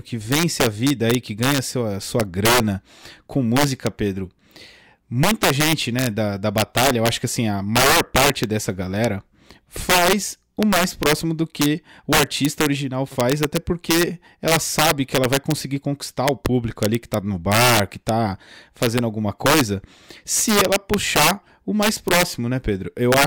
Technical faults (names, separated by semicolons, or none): integer overflow